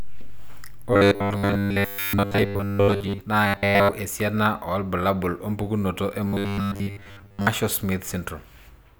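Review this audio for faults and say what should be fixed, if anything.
Robotic sound from repeated short buffers occurs at 0.93–3.21 s, 3.47–3.94 s and 6.25–7.47 s. Fresh audio was likely reaching playback too seldom. The software kept re-playing the last fragment, about 10 ms long, in place of the missing material for most of each stretch. That looping forces a fixed 100 Hz buzz onto the speech, turning it into a rigid, metallic drone that only roughly follows the original. A larger jitter buffer on the receiving side, with steadier delivery of audio to it, would prevent this.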